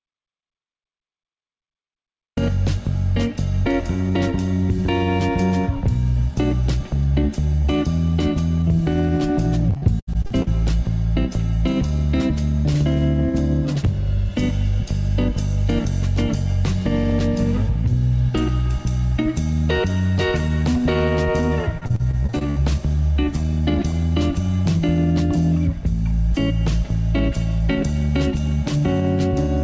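Audio dropout to silence runs from the very start to 2.37 s. The clip opens already in dead digital silence, with no room tone at all, which most likely means the input was lost while the recorder kept writing silence, before the sound abruptly begins.

Repeated packet loss (robotic sound) appears from 9.70 to 10.48 s and again from 21.78 to 22.58 s. In each burst, a rapid series of short holes, the longest about 76 ms and 57 ms respectively, is patched by stretching the preceding sound. Roughly a third of each stretch is this synthetic fill, giving a choppy texture with pieces missing. Through both bursts, the call path's band limit is audible, with nothing above 8 kHz, which fits G.722 at 64 kbps.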